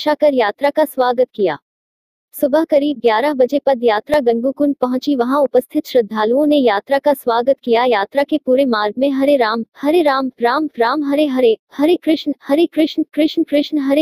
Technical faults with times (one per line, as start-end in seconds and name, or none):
4.14 repeated buffer